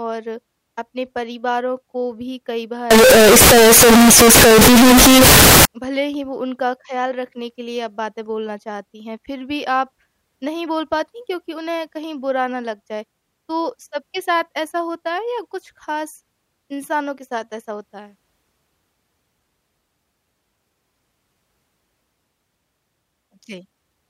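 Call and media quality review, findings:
Float read as integer, 2.91–5.65 s: speech turns very loud, harsh, near-square at an almost fixed high level, noise as loud as voice. Likely 32-bit float samples read as 32-bit integers.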